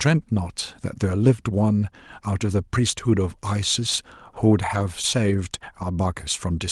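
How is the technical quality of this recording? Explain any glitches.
The recording carries two brief glitches of one kind, both heard over a call codec whose treble stops at about 12 kHz.

Lost packet rebuilt from error correction, at 4.75 to 4.81 s and again at 5.81 s: audio packets went missing, about 40 ms of sound in the first case and 20 ms in the second. The packet after each one carried a lower-quality backup copy, and the decoder played that copy, so there is no silence. Those moments sound briefly rougher and grainier.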